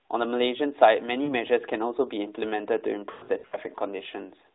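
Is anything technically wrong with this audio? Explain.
Yes. The audio has lost AMR speech frames. Around 1.24 to 1.33 s there is a brief warbly dip of about 40 ms, which fits two dropped frames. The bigger one runs from 3.12 to 3.57 s, where about 260 ms is lost in bursts spread over 400 ms. The longest gap is 100 ms, and in it the sound smears, fades, and then returns rough.

This happens when damaged frames are thrown away and the decoder repeats the last good settings at falling gain to fill the gap. On a spectrogram, the harmonics stretch flat and then thin toward silence. On a waveform, the envelope decays. The narrowband line still cuts everything above 3.7 kHz.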